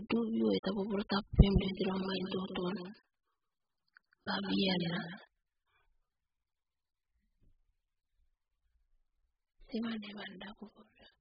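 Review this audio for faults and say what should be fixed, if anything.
Throughout, the speech is dull and smeared with nothing above 5 kHz, likely heavy AAC compression around 8 kbps; unlike simple low-pass filtering, it also warbles. Encode at a much higher bitrate.

From 1.49 to 5.27 s, a doubled audio track adds a full-band copy about 10 dB quieter, roughly 150 ms behind. Unlike echo, it has no decay and switches abruptly. Remove the duplicate capture path or misaligned edit copy.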